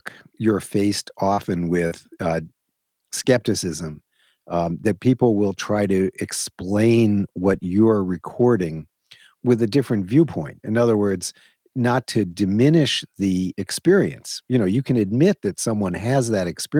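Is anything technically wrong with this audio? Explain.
Yes, there are two brief packet-loss events in this speech, both within the first two seconds.

Short concealed packet loss occurs at 1.33 to 1.40 s, just after "you're faced", and again at 1.87 to 1.94 s. Each time, about 40 ms of audio failed to reach the decoder in time, so the receiver invented a stand-in by extending the preceding sound (pitched continuation for voiced speech, shaped noise otherwise) before easing back into real audio. You hear a short smear or wobble, and a quick consonant there may disappear.

A lost packet rebuilt from error correction sits inside each of those gaps, at 1.37 to 1.39 s and at 1.91 to 1.93 s. A 20 ms packet went missing, but the following packet carried a reduced-bitrate duplicate through Opus in-band forward error correction, which the decoder played instead. Nothing drops out at those moments, but the recovered slice sounds coarser and noisier than the audio around it.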